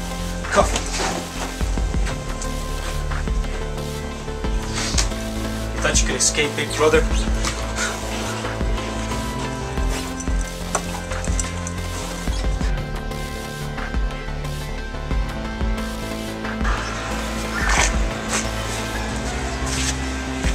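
Nothing stood out on listening to this recording.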